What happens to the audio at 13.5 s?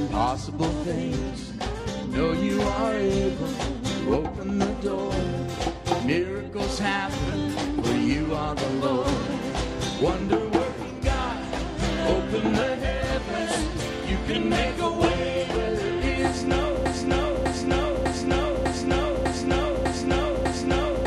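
Nothing goes wrong at 13.5 s; the audio carries straight through that moment without any break, glitch or disturbance.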